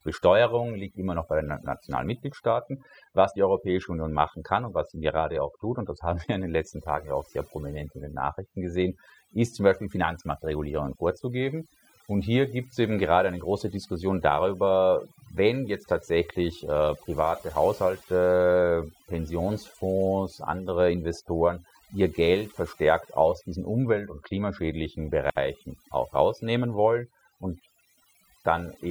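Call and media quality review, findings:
Overdone noise removal, throughout the speech. Background noise pulled down hard, then breaking into twinkling, warbling specks. Probable component: noise suppressor set too aggressive. Mechanism: individual frequency bands near its noise estimate are cut deep or gated off, frame by frame. Low-level parts of the speech fall under that estimate and are removed along with the noise.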